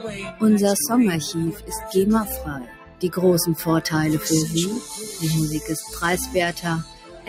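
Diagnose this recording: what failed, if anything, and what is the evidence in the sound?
A noise suppressor applied to music or sounds runs through the whole recording, a call-processing fault. Its gain swings by around 10 dB as a speech-tuned suppressor mistakes sustained content and ambience for noise, so the level pumps and thins while onsets pass.

Sound cut by the noise suppressor occurs at 0.00 to 0.42 s, 1.52 to 1.90 s, 2.59 to 3.03 s and 6.83 to 7.28 s. Steady or decaying sound sinks by about 11, 8, 14 and 12 dB respectively.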